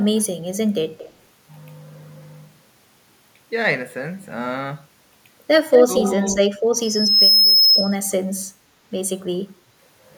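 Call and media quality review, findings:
Echo leak: far-end echo canceller likely not removing its loudspeaker pickup, so a delayed copy of the speech comes back 228 ms late. Faint and far below the speech at 0.97–1.13 s; nearly as loud as the speech at 5.71–6.12 s.

Speech suppressed in double talk: canceller likely mistaking local talker for echo while both sides speak, so it attenuates the speech. A shallow dip of a few dB at 5.78–5.91 s, during the strong echo; a deeper, briefer cut, around 10 dB, at 6.37–6.43 s.

Loudspeaker feedback squeal: mic hearing its own loudspeaker, with loop gain above one at 5.2 kHz, so that tone regenerates. It swells over about half a second into a squeal somewhat louder than the speech, 6.82–7.96 s, then stops.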